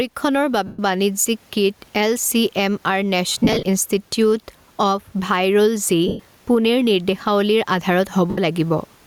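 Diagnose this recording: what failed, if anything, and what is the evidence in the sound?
Gain pumping runs throughout the speech: the room noise sits about 44 dB under the talker, and the gain swings by around 10 dB. This is likely excessive input gain at the converter stage, with a fast limiter in call processing clamping each peak.

Lost LE Audio frames at 0.67–0.79 s, 3.29–3.65 s, 6.08–6.20 s and 8.30–8.38 s, a codec and radio-link fault. Short gaps of 75 to 120 ms, which fit 7.5 ms LC3 frames, turn into a hissy smear as the decoder repeats the last spectrum with randomised signs. At 3.29 s, 180 ms of dropouts are scattered across 360 ms in runs of no more than about 30 ms.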